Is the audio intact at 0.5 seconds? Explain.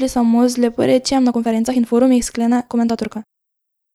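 Yes, at 0.5 seconds the speech plays through intact, with no audible fault at that moment.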